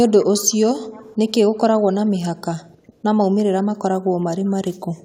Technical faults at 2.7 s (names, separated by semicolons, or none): none